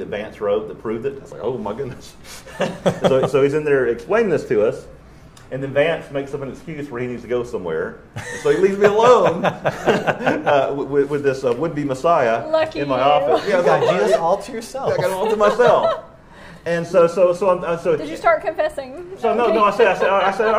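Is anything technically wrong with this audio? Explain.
No, nothing technically wrong turns up anywhere in this recording.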